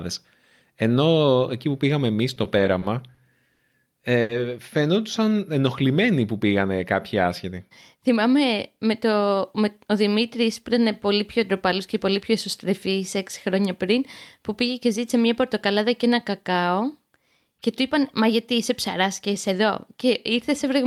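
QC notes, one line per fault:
2.35–3.61 s, repeated stalls (stutter): right after "εκεί που πήγαμε εμεί" the speech drags and catches seven times, with held sounds totalling 160 ms and the longest 60 ms. Packets kept arriving late, so the jitter buffer repeatedly emptied and the receiver extended the last sound each time. Nothing is lost.
4.21–4.31 s, short stall from a late packet: one sound is held about 80 ms too long, with a faint buzz or dip. A single packet was late, emptying the jitter buffer, so the receiver stretched the previous sound until it arrived and resumed from the same point.
7.45–8.41 s, jitter buffer speed-up: after "ενοχλημένοι που πήγανε κάποιοι" the speech sounds rushed, running about 7% fast with unchanged pitch. The buffer had built up excess delay, so the receiver trimmed roughly 70 ms in many small pitch-period cuts to catch up.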